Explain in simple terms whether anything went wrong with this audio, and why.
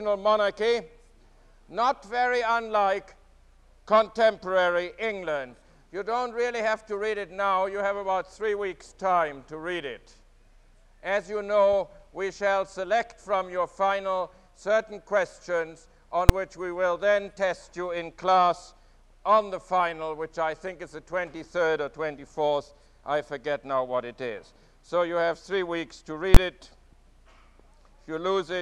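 Something did go wrong: two cases of invalid numbers at full scale. A calculation blew up, and the output jumped to its loudest possible value, giving a sharp, very loud bang at 16.29 s and another from 26.35 to 26.37 s.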